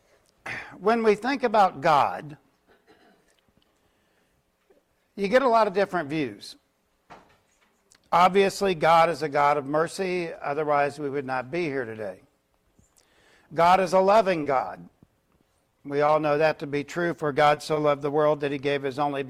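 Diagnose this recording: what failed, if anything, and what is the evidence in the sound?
Network stage, short concealed packet loss at 14.43, 14.57, 15.69, 16.06 and 17.54 s: about 20 ms goes missing each time and is smeared over by extrapolation.

Network stage, short stall from a late packet at 17.74 s: the jitter buffer ran dry, so the sound is held about 20 ms longer, with nothing lost.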